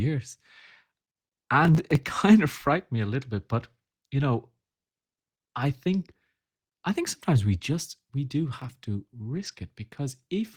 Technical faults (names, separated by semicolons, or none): processor overload crackle; lost packet rebuilt from error correction